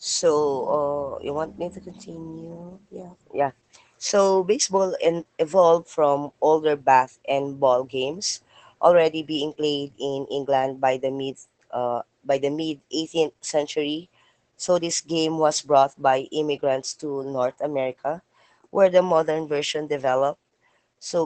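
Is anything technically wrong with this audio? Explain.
Yes. Opus voice compression runs throughout: coarse linear-prediction coding, pointing to roughly 12 kbps, removes all content above 8.6 kHz, leaving the speech plainly muffled and hoarse.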